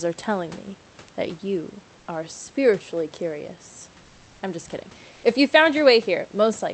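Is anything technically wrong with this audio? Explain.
Yes, one spot. From 5.11 to 5.23 s, about 120 ms, there's comfort noise in place of the background: the real room noise gives way to a flat, featureless hiss about 1 dB quieter. Likely the sender's Opus DTX stopped transmitting during a speech pause, so the receiver filled the gap with synthetic noise.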